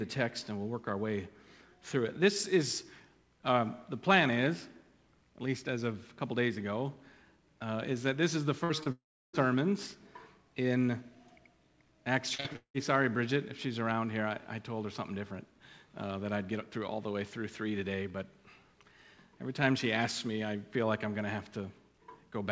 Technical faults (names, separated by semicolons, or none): burst of packet loss; short concealed packet loss; long network dropout; repeated packet loss (robotic sound)